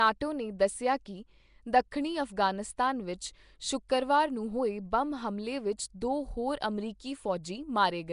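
The whole clip has a rough, hissy halo around the speech and a smeared, underwater feel, with nothing above about 10.6 kHz. That points to Nellymoser compression as the likely cause, and the amount of damage fits a rate around 44 kbps.

There's pre-echo at 3.89 s and again at 5.78 s: a brief hiss of about 10 ms, then about 14 ms, creeps in just ahead of a sharp attack, softening it. The codec's noise for the loud block spilled into the quiet moment before.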